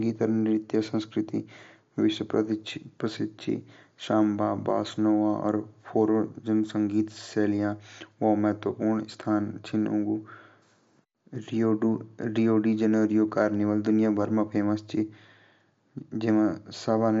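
Nothing in this speech recording stood out as a technical fault on listening.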